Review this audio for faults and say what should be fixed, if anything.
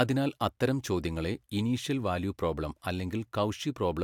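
Nothing stood out on listening to this speech recording, so there is nothing that needs fixing.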